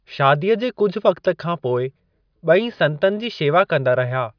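No technical faults can be heard anywhere.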